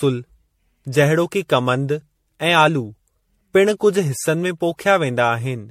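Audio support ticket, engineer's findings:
Generation loss throughout the speech: swirly, hollow tone, smeared consonant onsets, nothing above 16.5 kHz. Likely repeated MP3 re-encoding, around seven passes, which fits a 64 kbit/s chain. Each pass requantises on a shifted frame grid. The smearing goes beyond what a single 64 kbit/s encode gives.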